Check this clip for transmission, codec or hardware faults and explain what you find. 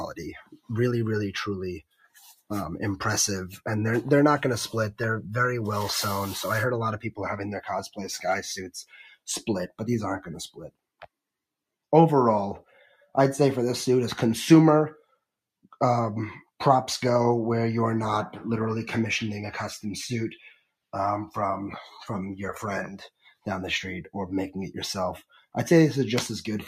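A speech-tuned noise suppressor is processing this sound, and it produces two related faults.

Across the whole clip, a noise suppressor applied to non-speech sound is mistaking sustained tones, ambience and decays for noise. The level keeps swinging by about 5 dB as the gain rides up and down. Attacks come through, but held material sinks and tails thin out, giving a pumping flutter. A dropout or limiter sounds different: a dropout breaks off completely, and a limiter responds to loud peaks rather than to steady parts.

At five moments the noise suppressor cuts the sound much harder: 0.43 to 0.70 s (about 19 dB down), 1.82 to 2.18 s (about 16 dB), 8.87 to 9.27 s (about 16 dB), 23.09 to 23.46 s (about 15 dB), and 25.29 to 25.55 s (about 15 dB). In each one the suppressor has classed the sound as noise and pulled it far down, so it dips sharply for a fraction of a second and then recovers. 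A packet loss gap would be different, because it leaves silence or a repeated fragment, whereas here the sound is still audible, only much quieter.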